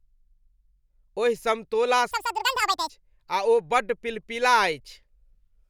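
From 2.11 to 2.90 s the speech is audio read two samples at a time, so it plays at double speed. The reader has treated each pair of samples as one frame, as if the stream held two channels or wider samples. The content goes by in half the expected time. That stretch runs twice as fast and an octave high, 12 semitones up.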